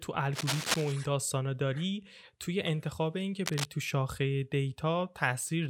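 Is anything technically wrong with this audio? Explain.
Yes. There is cable scratch noise, from about 0.33 to 0.92 s and again from 3.46 to 3.65 s. Dense, ragged rustling sits only slightly below the speech, likely from a worn cable or connector being moved and its contact resistance fluctuating. On a spectrogram it appears as broadband vertical smears, and on the waveform as jagged bursts.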